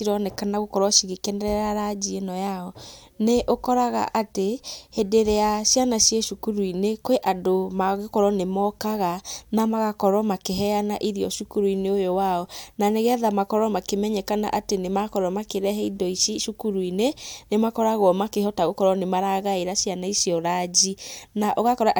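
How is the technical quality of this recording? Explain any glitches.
No glitches turn up anywhere in this speech recording. There is nothing at any point that calls for an explanation.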